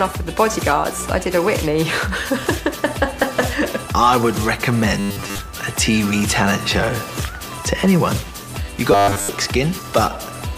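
From 5.00 to 5.39 s and 8.92 to 9.29 s, robotic sound from repeated short buffers adds a rigid 100 Hz buzz, likely from replayed 10 ms chunks, seen as evenly spaced 100 Hz harmonic stripes.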